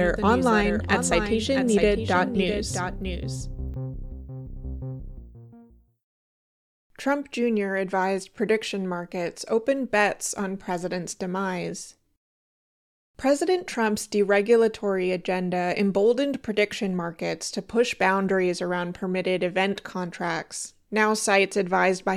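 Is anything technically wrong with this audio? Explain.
Yes. From the very start until 3.74 s there is a doubled audio track. A second, slower capture path or an out-of-step edit likely mixed in a full-band copy trailing by roughly 0.7 s, around 10 dB quieter, with no decay or room colour, stopping abruptly.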